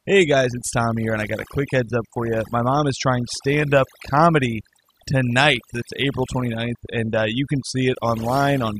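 From start to finish, the speech carries overdone noise removal. A noise reduction stage was pushed too hard on a noisy recording. It cuts individual frequency bands deeply whenever they sit close to its noise estimate. Quiet parts of the voice fall below that line and vanish along with the noise. The gaps between phrases drop to near silence, dotted with twinkling specks.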